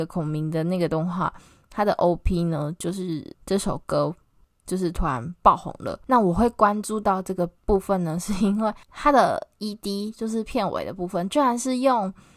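No audible technical faults anywhere in the speech recording.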